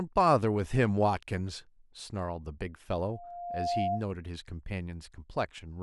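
From 3.09 to 4.05 s a loudspeaker feedback squeal rises at 700 Hz. The microphone picks up the loudspeaker, and at that frequency the loop gain passes unity, so the tone grows by itself. Unlike a steady interfering tone, it swells over most of a second, ending roughly as loud as the speech.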